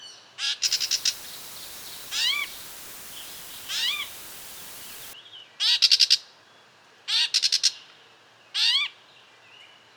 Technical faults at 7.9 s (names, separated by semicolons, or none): none